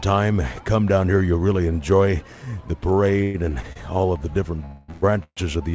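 At 3.23 to 3.37 s the sound stops moving forward and the last instant is held as a fading buzz for about 0.11 s. It then resumes exactly where it left off, with nothing skipped. This is a call audio freeze. Packets were likely held up in transit, so the jitter buffer ran dry and the receiver kept extending the final sound until the delayed audio arrived. That inserts a gap instead of losing anything.

Shortly after, at 3.61 to 3.67 s and again at 3.73 to 3.79 s, a sound lingers a touch too long, with a faint buzzy dip of about 26 ms and then 30 ms. These are short stalls from a late packet. Each time, one packet missed its playout moment, the receiver stretched what it already had, and playback picked up from the same point once the packet turned up.

The freezes return more heavily from 4.66 to 4.91 s and then straight on to 5.05 s. The held buzz lasts about 0.23 s and is followed at once by another 0.11 s of the same drawn-out fade, so the sound hangs for over a third of a second in total. 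At 5.23 to 5.40 s a further call audio freeze fills about 0.13 s. Here the continued sound dies away into roughly 60 ms of silence before the audio carries on, again with nothing missing. Across all of this the band stops at 8 kHz, which fits a G.722 call path at 64 kbps.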